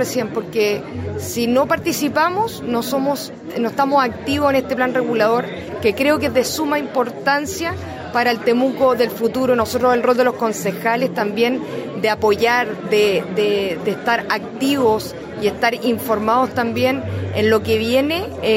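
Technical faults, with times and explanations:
1.83 s and 13.85 s, dropped buffer (overrun): each time the audio jumps forward abruptly. No gap of silence comes before it. The first jump skips only a few milliseconds, and the second skips around ten. The likely cause is that samples were not collected before the hardware overwrote them, so the ends on either side join directly. On a waveform this appears as a sharp discontinuity at each point. On a spectrogram it shows as a thin vertical broadband line.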